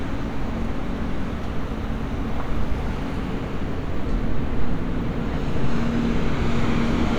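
No technical faults can be heard anywhere in this recording of everyday sounds.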